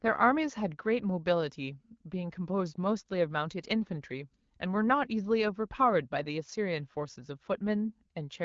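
No faults found: the speech runs through the AMR wideband (HD Voice) codec at 12.65 kbit/s with only light coding damage, and the band up to 6.4 kHz stays clear while the 6.4 to 7 kHz region is filled with shaped noise.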